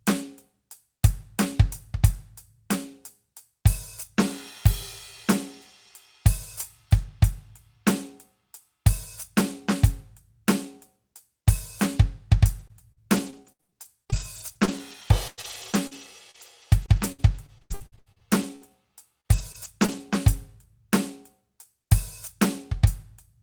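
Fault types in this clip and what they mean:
Repeated packet loss (robotic sound): from about 12.6 to 20.0 s the music turns choppy, with 32 short holes, the longest 100 ms. Lost or late packets are each papered over by stretching the preceding sound, roughly a second rebuilt and about 1.18 s missing.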